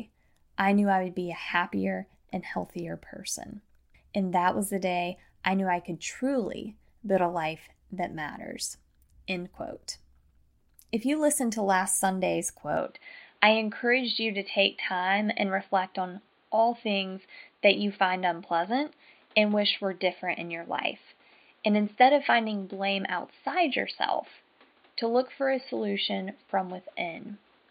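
From 12.77 s nothing above 4.6 kHz remains and new background noise appears, unlike a plain filter; likely an input switched to a poorer device.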